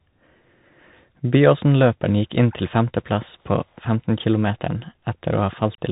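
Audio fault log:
throughout: Bluetooth CVSD headset codec. The speech stops dead at 3.8 kHz over a grainy hiss. Loud bright sounds outrun the adaptive one-bit step and distort, and s sounds turn gritty. That granular texture, fitting a 64 kbps delta-modulated link, separates it from plain low-pass filtering.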